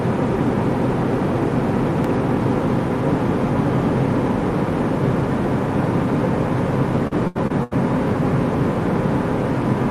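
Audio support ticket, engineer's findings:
Repeated packet loss (robotic sound), 7.07–7.73 s. Choppy stretch with pieces missing: four dropouts, longest 80 ms, about a third of the span patched by repeating the last sound. Probable component: network jitter buffer / loss concealment. Spectrogram shows smeared, repeated frame blocks with abrupt edges and flat harmonic bands; waveform shows short copied segments and sudden amplitude steps at each hole.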